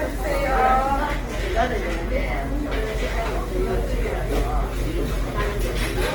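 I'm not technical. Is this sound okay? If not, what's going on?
No. The sound has a grainy, rough texture from start to finish, across the whole clip of about 6 seconds. Steady tones come out noisy and coarse instead of clean. The high end still reaches right up to the top of hearing, so it doesn't sound muffled. This is likely Opus compression squeezed too hard. When the encoder runs short of data, it fills the gaps with noise-like texture. That keeps the overall tone but roughens the detail.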